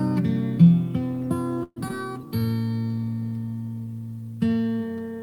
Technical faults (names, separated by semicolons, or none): call audio freeze; skip ahead; jitter buffer slow-down